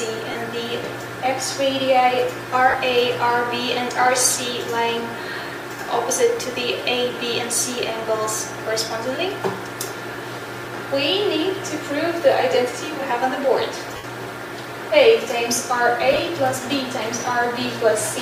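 Lost LE Audio frames break the sound at 0.31 s (37.5 ms), 2.70 s (30 ms), 13.96 s (75 ms, the longest), and 16.13 s, where 37.5 ms of loss is spread over 60 ms in short runs, the longest around 15 ms. The lengths fit 7.5 ms frames. The LC3 decoder fills each gap by reusing the last spectrum with random signs, so tones turn into a noisy smear instead of dropping to silence or stuttering as a repeated loop would. The lossy compression itself leaves only light codec damage.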